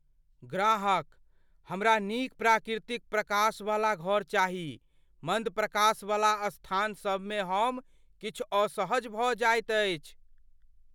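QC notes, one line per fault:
No faults heard in this speech clip.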